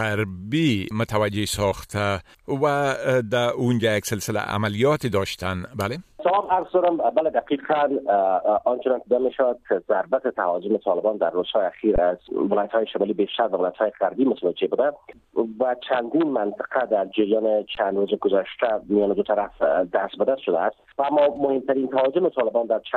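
At 11.96 to 11.98 s and again at 17.75 s, an underrun with held sample flattens the waveform for about 20 ms and 18 ms respectively; playback resumes where it stopped, so each gap ends softly.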